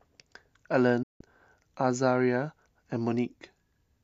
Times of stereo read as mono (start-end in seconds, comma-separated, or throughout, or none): none